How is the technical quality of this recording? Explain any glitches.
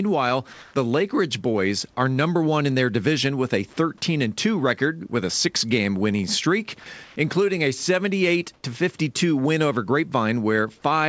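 The speech carries a few brief glitches where the background or a bit of speech is replaced by smooth, featureless noise. The call path's codec bandwidth is capped at 8 kHz throughout.

Comfort noise in place of the background occurs at 0.53–0.74 s, 7.04–7.16 s and 8.54–8.63 s. The pauses likely stopped being transmitted, so the receiver synthesised steady noise, up to about 3 dB quieter. No speech is lost.

Sound dropped by the voice detector occurs at 6.80–6.86 s, between "winning streak" and "including a". The detector likely mistook the sound for background, clipping about 30 ms of speech itself rather than just pause noise.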